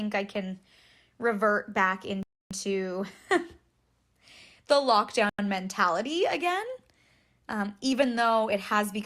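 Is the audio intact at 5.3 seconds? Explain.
No, a block of digital silence runs from 5.29 to 5.39 s, a hole of about 93 ms, which fits a 4096-sample buffer that wasn't filled in time. The speech drops out and back with no fade, leaving a short hole.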